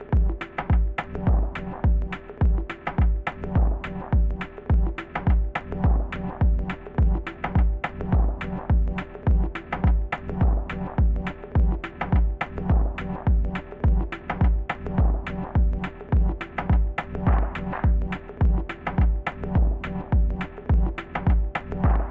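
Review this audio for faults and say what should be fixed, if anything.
Nothing stood out on listening, so there is nothing here that calls for fixing.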